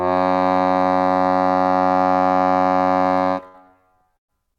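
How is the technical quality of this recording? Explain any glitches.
The recording has three network glitches, all in the second half. They get worse toward the end.

At 2.84 to 2.90 s there is a short stall from a late packet. The packet arrived behind schedule and the jitter buffer ran dry. The receiver held the last sound for about 22 ms until the data turned up, then carried on from the same point. Nothing is lost. The music simply hangs for an instant, and playback runs 22 ms later from then on.

At 3.48 to 3.57 s comes a burst of packet loss. Several packets in a row never arrived in time. The receiver extended the last sound for about 60 ms while fading it down, then skipped ahead. You hear a brief held, dimming tone. Then the music jumps, with about 60 ms of it gone.

From 3.97 to 4.58 s there is repeated packet loss, heard as robotic sound. Packets dropped four times in quick succession. 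Each hole was patched by stretching the last sound, about 155 ms of patching in all. That is roughly a quarter of the stretch. The longest gap is 112 ms. The music turns choppy and stuttering, with about 120 ms missing across the four gaps.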